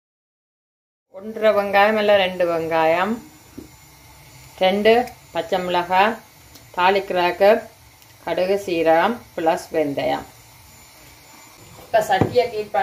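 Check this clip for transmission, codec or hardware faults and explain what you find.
Nothing here points to a transmission, codec or hardware problem, and the only notable thing is a gentle fade-in from around the one-second mark up to full level at 1.71 s, just the way an editor would shape the opening.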